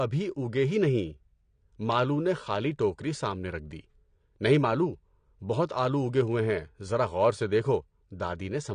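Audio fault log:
Throughout, AAC compression: the speech sounds dull and smeared, with a warbling, fizzy texture on sustained vowels and sibilants that is plainly audible across the clip. This likely comes from AAC-LC coding at a low bitrate, and the degree of damage fits a rate near 32 kbps. With so few bits, the encoder lowers its cut-off and quantises each frame's frequency lines coarsely, leaving gaps or substitute noise in the upper bands.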